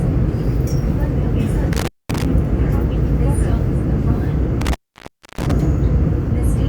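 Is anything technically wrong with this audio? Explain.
Yes. An intermittent contact cuts the audio twice: from 1.73 to 2.25 s, with the line open for about 0.22 s, and from 4.61 to 5.51 s, open for about 0.64 s. A loose plug or cable briefly loses connection, so the signal drops to faint hiss, with crackle as the contact breaks and remakes. On a waveform each dropout is a sudden near-flat gap framed by sharp spikes. A spectrogram shows vertical broadband streaks at the edges around a dark, low-level band.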